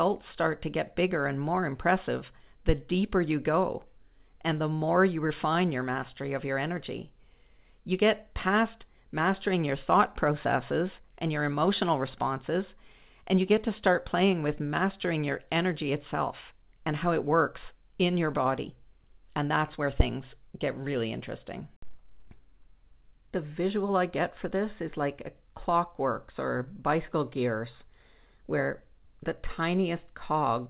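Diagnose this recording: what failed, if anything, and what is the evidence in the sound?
Nothing failed; every stage in this recording works as expected.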